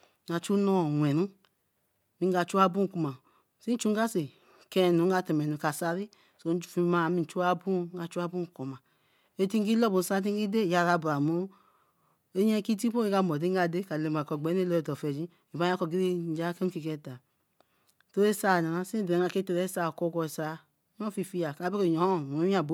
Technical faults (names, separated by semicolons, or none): none